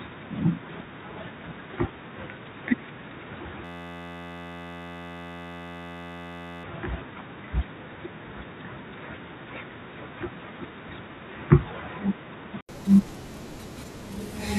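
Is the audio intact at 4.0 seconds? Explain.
No. From 3.65 to 6.64 s a system hang loop is under way: the computer or driver stalled while the audio hardware kept replaying the same 11.61 ms slice of its ring buffer, which fits a 512-sample buffer. That slice repeats at 86.1 Hz, so the sound is replaced by a steady buzz.

The same moment also falls inside the stretch from 0.0 to 12.69 s where the input was likely switched to a poorer device. The band stops at 3.8 kHz, so the sound is dull and boxy. The level is about 5 dB lower, and a new noise floor sits roughly 45 dB under the signal. A short gap of about 80 ms marks the switch back near 12.69 s.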